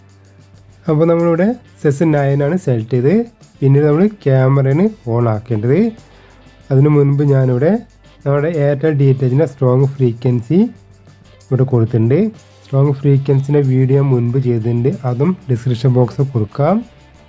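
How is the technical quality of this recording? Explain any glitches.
No glitches turn up here; the recording runs along without any dropouts, clicks or other interruptions worth pointing out.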